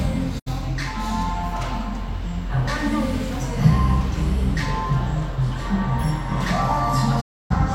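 Everyday sounds fall silent twice, briefly at 0.38 to 0.48 s and for longer at 7.20 to 7.52 s, each mute arriving through a quick 20 ms fade. This is a digital broadcast dropout: the receiver muted on corrupted frames, the gaps fitting roughly two and nine lost frames, and that audio is gone.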